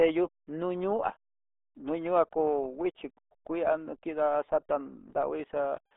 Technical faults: RealAudio 14.4 codec

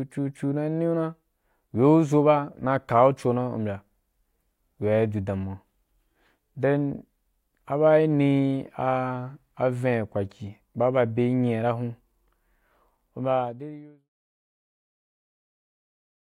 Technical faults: none

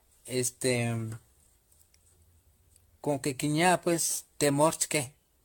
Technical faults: generation loss

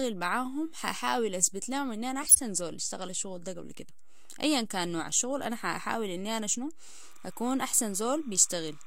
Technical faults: DC offset; corrupt frame decoded; timecode bleed

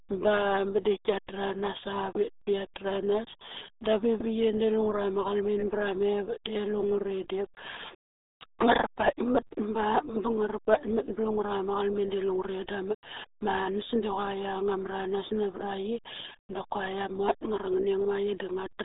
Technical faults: RealAudio 14.4 codec

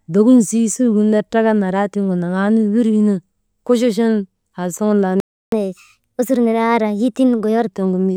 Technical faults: playback stall; catch-up at higher speed

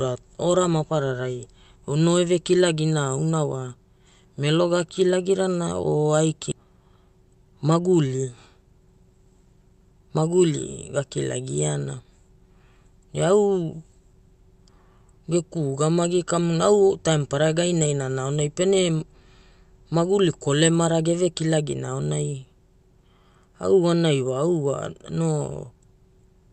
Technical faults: skip ahead; jitter buffer speed-up

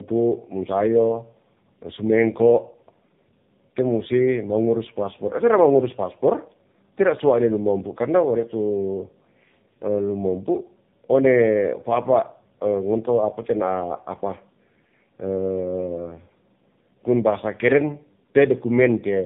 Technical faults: tandem speech coding

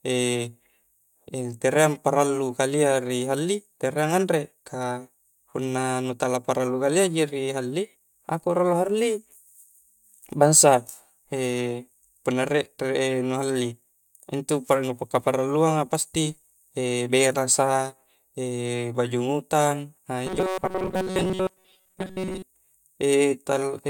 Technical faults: robotic sound from repeated short buffers

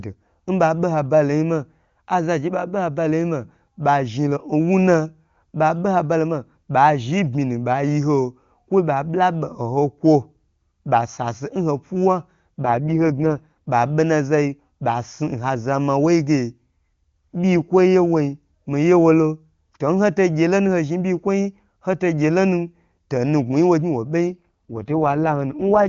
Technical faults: AMR rate drop

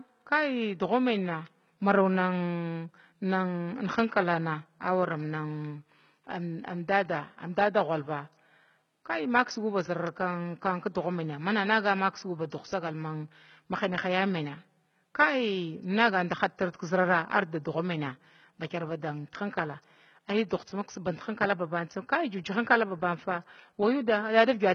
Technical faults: HE-AAC compression; pre-echo

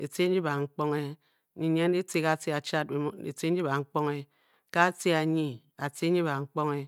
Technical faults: none

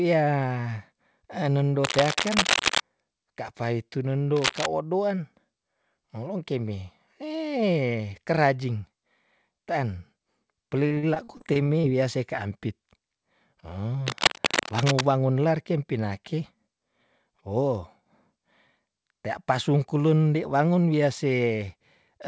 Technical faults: cable scratch noise; repeated packet loss (robotic sound)

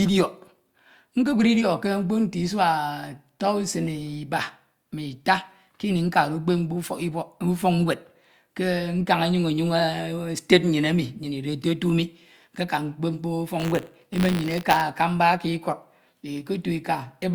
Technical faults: buffer tearing

